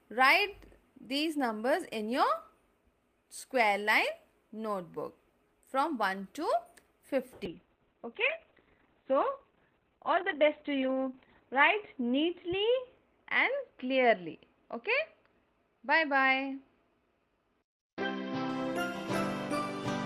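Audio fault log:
7.48–18.55 s, call bitrate drop: the bandwidth estimate fell and the encoder was squeezed from what sounds like about 32 kbps to about 7 kbps, bottoming out for about 4 s. Coarse coding turns the sound rough and watery, and the high-frequency cut-off falls from 20 kHz to 4 kHz, muffling it.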